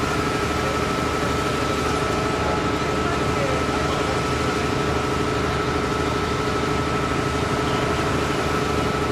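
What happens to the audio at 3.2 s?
At 3.2 s the sound is dull, losing some of its airy top end, because of channel delay (comb filtering) running from 1.92 s to the end. One channel lags by roughly a single sample, and summing to mono cancels the highest frequencies near 20 kHz.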